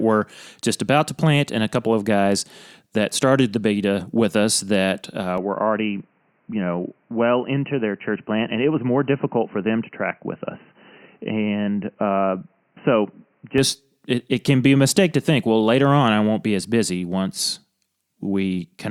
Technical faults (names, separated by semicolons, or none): input switched to a poorer device